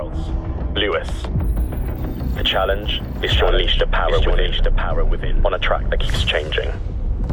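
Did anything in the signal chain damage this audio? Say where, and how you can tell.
Yes. From 2.52 s to 6.08 s the audio carries a doubled audio track. A second full-band copy trails the original by roughly a second. It sits about 5 dB below it. The copy has no decay and no added room colour, so it is not an echo or reverb tail. It cuts in and out abruptly at those two times. The likely cause is a slower second capture path or an edit that left two copies out of step.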